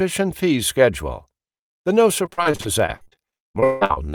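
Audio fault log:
2.25–3.98 s, repeated packet loss (robotic sound): audio keeps dropping out across this stretch in 22 separate gaps, the longest lasting 171 ms. Each hole is bridged by stretching the sound that came just before it, so about 40% of the span is concealment rather than real signal. Because one patch barely ends before the next begins, the speech turns choppy and robotic, with pieces missing.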